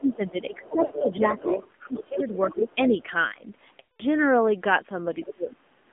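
Speech arrives through the AMR narrowband mobile codec for the whole clip. Nothing passes below about 200 Hz or above 3.5 kHz. The voice sounds buzzy and synthetic, with plainly audible codec damage. The coarse pulse coding points to a low rate, roughly 7.4 kbps. From 0.00 to 1.37 s the talker's speech is suppressed in double talk. It dips and breaks up in pieces, about 0.7 s in total, falling by around 15 dB at worst. The likely cause is an echo canceller turning down both voices while the far end also speaks. Over much of that span, from 0.63 to 2.75 s, the other side's voice leaks through. It sits only a little below the talker. This is likely loudspeaker echo that the canceller failed to remove. Lost AMR speech frames appear twice. At 0.86 to 0.92 s a 40 ms gap gives a brief warble, which fits two dropped frames. At 3.80 to 4.03 s a 200 ms run stretches the sound, then fades it to silence, which fits ten lost frames. 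The decoder repeats its last good settings with falling gain until fresh frames arrive. The voice then returns weak or rough for a moment. Near the end, from 5.22 to 5.56 s, the other side leaks through again. This time it is faint, roughly 15 dB down, and again likely residual echo. From 5.25 to 5.92 s the talker is suppressed once more. The drops are far deeper, around 35 dB, and cover about half a second in total.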